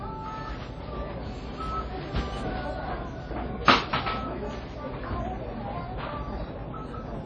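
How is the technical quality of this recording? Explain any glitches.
Technical quality is poor, with plainly audible codec damage throughout the whole clip. The fault is WMA compression, likely from a low-bitrate Windows Media Audio encode, and the damage fits roughly 32 kbps. The transform coder works in long blocks, so quantisation noise smears across tens of milliseconds and weak spectral lines are discarded. Nothing survives above about 9.5 kHz, so the sounds come across dull, ringing and washy, with a hiss that swells and fades alongside them.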